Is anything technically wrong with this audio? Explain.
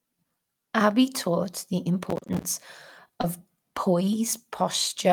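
Yes. There are two separate faults in this speech.

From 2.10 to 2.44 s there is processor overload crackle. The processing could not finish its short buffers, each around 10 ms, on schedule, and about twenty in that stretch missed their deadline. Every missed buffer was replaced with silence, so the speech is broken by many small hard-edged dropouts. Together they make a gritty, tearing crackle across that third of a second, and it clears once the load eases.

At 3.21 to 3.25 s there is short concealed packet loss. About 20 ms of audio did not reach the decoder in time. The receiver covered roughly 18 ms of the gap by extending the preceding sound and then crossfaded back into the real signal. The result is a brief smear or wobble in the speech rather than a clean gap.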